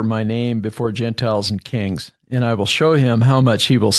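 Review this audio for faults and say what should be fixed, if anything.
From 0.77 s, just after "my name", through to the end, the speech and the background noise swell louder together, climbing steadily rather than jumping. This is automatic gain rising: the gain control judged the input too quiet and kept pushing its gain up. To prevent it, set the microphone level correctly before the call and cap or disable automatic gain so it cannot ramp up mid-sentence. The call path itself shows as a top end stopping around 12 kHz, which fits Opus at a moderate bitrate.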